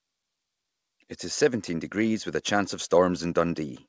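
Nothing here counts as a fault: the speech has simply come over an ordinary call connection, and the empty band above 8 kHz is just what a wideband call codec like G.722 would be expected to leave.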